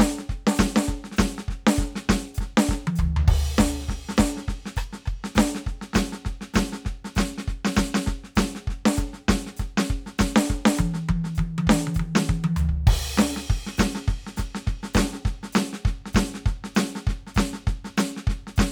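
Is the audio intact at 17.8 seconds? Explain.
Yes, the music plays through 17.8 seconds without any dropout, click, distortion or other audible fault at that moment.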